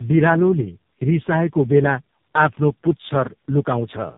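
From start to finish the speech sounds rough, muffled and warbly, with nothing above 3.8 kHz. This is tandem speech coding: the signal points to three speech codecs in a row, each re-encoding the previous one's already degraded output.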